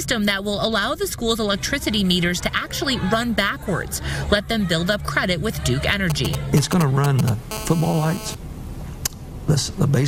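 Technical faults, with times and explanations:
6.1–7.52 s, GSM signalling bursts: a galloping dit-dit-dit of brief 217 Hz buzzes, loud and only slightly below the main sound. A nearby 2G phone was sending short groups of radio bursts, rectified by the audio circuit, so the buzz breaks into clusters rather than holding steady.
7.52–8.35 s, GSM phone buzz: a hard, raspy 217 Hz buzz rich in harmonics, about 12 dB below the main sound and unrelated to it. Unlike the earlier clusters it is continuous, because the phone had moved into a call and was transmitting bursts 217 times a second without pause.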